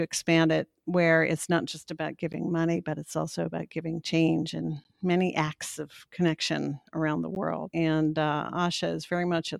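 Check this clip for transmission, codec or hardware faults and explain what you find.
The clip shows one fault: a gap between chunks, occurring three times. The holes fall at 2.33 s, between "it's not just about" and "money but it's also"; at 4.84 s, before "many acts of connection"; and at 7.35 s, after "of connection around the". Each lasts 12 ms. The speech arrived in 2.5 s chunks, and silence sits at each join. Nothing is lost, but the speech is interrupted by short holes at regular intervals.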